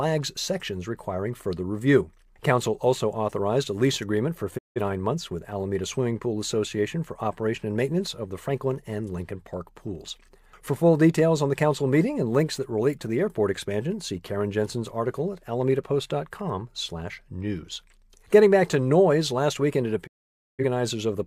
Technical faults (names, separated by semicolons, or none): digital broadcast dropout